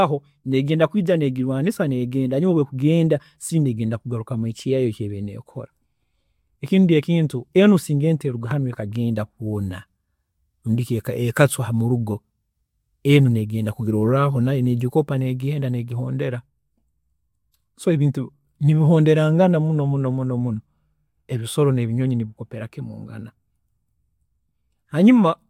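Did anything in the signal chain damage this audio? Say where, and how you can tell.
No, nothing along the chain seems to have harmed this speech recording, and there's no stage you could point to as having left a mark on it.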